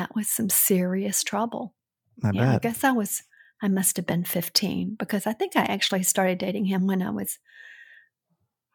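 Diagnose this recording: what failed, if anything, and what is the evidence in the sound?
No faults detected in recording.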